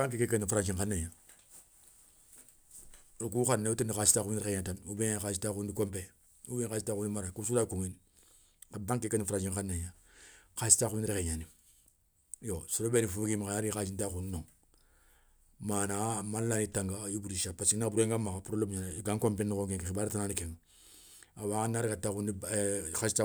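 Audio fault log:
No technical faults are present in the speech signal, which holds steady level and continuity throughout.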